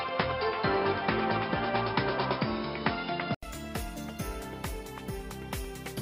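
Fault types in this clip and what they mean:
Input switched to a poorer device: likely another mic until 3.43 s, nothing above 5.2 kHz and extra noise, then an 80 ms gap before it opens up.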